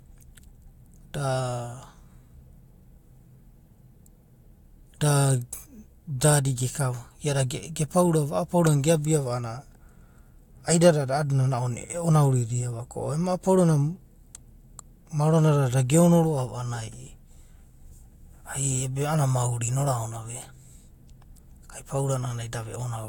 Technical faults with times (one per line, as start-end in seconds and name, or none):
none